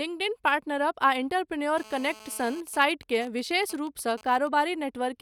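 A hard, raspy buzz with a dense stack of harmonics sits under the speech from 1.78 to 2.61 s, steady at 217 Hz and about 21 dB below the talker. This is GSM phone buzz: a nearby 2G handset in a call transmits radio bursts 217 times a second, and the audio circuitry rectifies them into an audible tone. From 2.67 to 4.48 s the buzz breaks into even ticks with a longer 217 Hz buzz twice a second, roughly 20 dB down. These are GSM signalling bursts, which a nearby phone sends in sparse groups while its user stays silent during the call.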